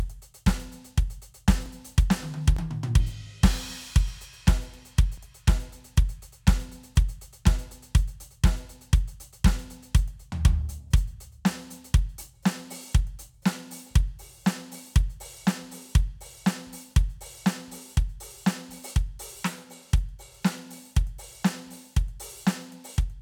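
At 1.66 s and again at 2.57 s the music jumps, and at 5.18 s there's a bigger skip. These are most likely dropped buffers (overrun): the program didn't collect the samples in time, they got overwritten, and the audio on either side was spliced straight together. The first two lose only a few milliseconds, while the third loses roughly 15 ms, so that jump is the longest.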